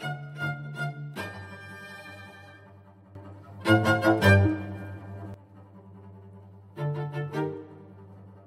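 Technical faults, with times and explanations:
3.15–5.34 s, sudden gain jump: the digital gain was likely switched up by about 12 dB from one sample to the next, with no ramp. The music and its background noise leap louder together at 3.15 s, stay raised, then fall back abruptly at 5.34 s.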